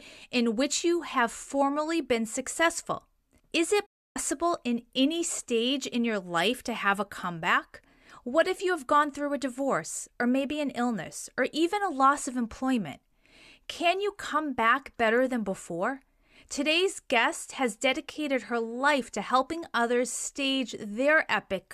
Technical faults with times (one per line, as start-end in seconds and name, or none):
3.86-4.16 digital broadcast dropout